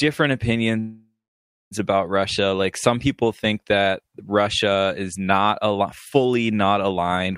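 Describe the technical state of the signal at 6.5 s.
At 6.5 s the speech signal is intact, with no audible technical fault at that moment.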